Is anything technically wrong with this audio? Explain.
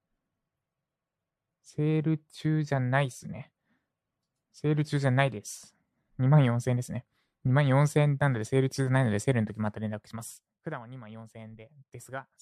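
Yes. Zipper noise runs from 9.46 to 10.74 s. The speech drops about 15 dB in unsmoothed 1 dB steps, about fifteen a second. Each step clicks, so a ticking rides on the sound. The waveform envelope forms a staircase, and the spectrogram shows faint vertical lines at each step.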